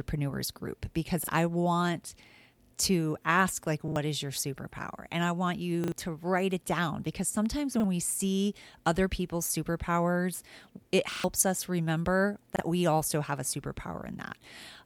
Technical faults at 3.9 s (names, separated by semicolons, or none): repeated buffer